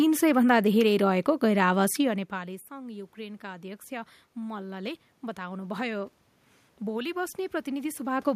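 This is a speech clip with automatic gain rising. Around 2 seconds the talker moves away, and the input level drops by about 19 dB. The automatic gain control reads this as a quiet signal. From 2.01 s to 6.11 s it slowly raises its gain by about 8 dB. The voice swells back up over those four seconds. The room noise swells with it, because the control lifts everything it hears.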